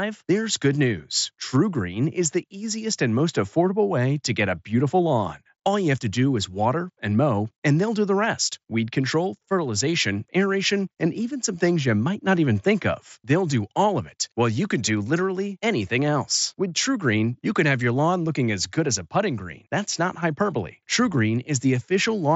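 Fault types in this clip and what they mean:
No faults present; the speech arrives over a Bluetooth mSBC headset link at 61 kbps, band-limited to 8 kHz with the light codec grain that path carries.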